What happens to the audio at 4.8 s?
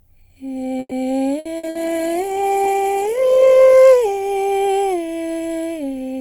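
At 4.8 s the music is still inside a call bitrate drop running from 1.58 to 5.35 s. The encoder's budget falls from what sounds like around 48 kbps to roughly 13 kbps, so it codes coarsely and trims the highs, leaving the music muffled and watery.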